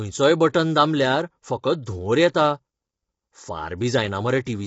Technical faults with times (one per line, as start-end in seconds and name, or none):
0.00-4.66 low-delay AAC compression